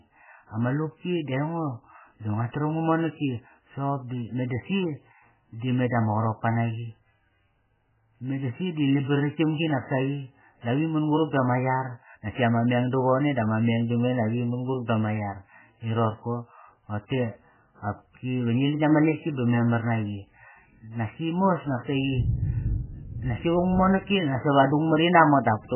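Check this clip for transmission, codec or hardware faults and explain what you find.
One codec fault is present. Likely MP3 compression, throughout: the encoder starved of bits cut everything above 3 kHz and dropped weak components, leaving heavily watery, swirly speech, which fits roughly 8 kbps.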